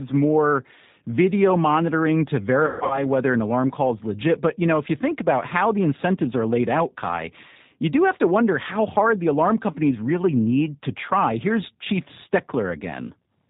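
Throughout, the speech sounds slightly rough and synthetic, with nothing above 4 kHz. This is plainly audible G.729 codec damage (the G.729A variant). The decoder rebuilds each 10 ms frame from a vocal tract filter, a pitch predictor and a handful of pulses rather than the actual waveform, which fits an 8 kbit/s VoIP link and accounts for the dull, processed character.

From 2.66 to 3.09 s, just after "more video monitoring to", the sound smears into a stretched, buzzy tone or coloured noise that sags in level and stays weak and distorted until "an alarm call is". This is VoIP packet loss concealed by the speech codec. About 210 ms of audio went missing across a 240 ms span, with the longest gap 150 ms, which points to roughly seven lost packets. The decoder filled the holes by extrapolating its last pitch and filter at falling gain, and because each frame builds on the one before, the voice takes a moment to recover once packets return.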